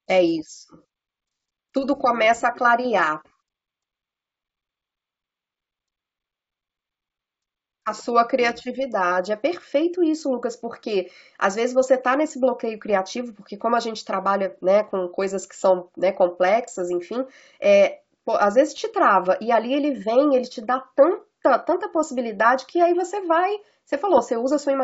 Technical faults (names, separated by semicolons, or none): bit errors on an ADPCM link